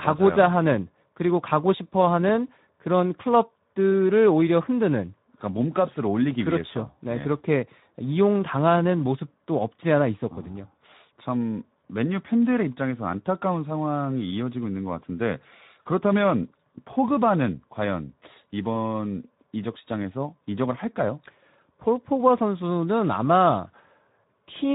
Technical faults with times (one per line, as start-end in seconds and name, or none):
0.00-24.74 Speex codec